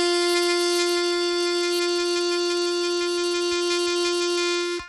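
Music, carrying plainly audible Bluetooth SBC compression damage throughout: treble flickers and cuts off above 16.9 kHz, with gritty grain and aliasing, likely from a starved bit pool that fits roughly 96 kbps. A spectrogram shows a hard ceiling and patchy, blinking upper bands.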